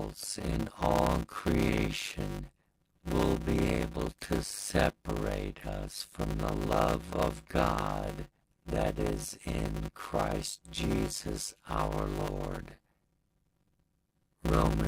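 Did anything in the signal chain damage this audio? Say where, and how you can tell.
Yes. A block size mismatch (padded) at the driver or buffer stage runs through the whole clip: one stage writes shorter blocks than the next reads, which fits 256-sample writes, and the remainder of each block is zero-filled. Every block therefore carries a short silent gap, heard as a steady 100 Hz buzz, and the sound plays at 0.533 times its proper speed while keeping roughly its normal pitch.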